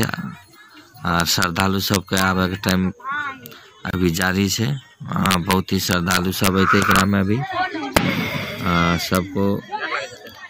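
Integer overflow from 0.03 s onward: peaks going past the integer limit wrap to the opposite sign instead of being limited. The overload reaches about 0 to 4 dB, and each overshoot cracks at 0.03, 1.2–2.2 and 2.69–2.71 s. At 3.91 s there is a gap at a join of encoded pieces, where encoder delay and end padding were left in and open a break of about 27 ms before the sound carries on. The overflow cracks return at 4.22, 5.26–5.53, 5.91–7.01, 7.97 and 9.15–9.17 s.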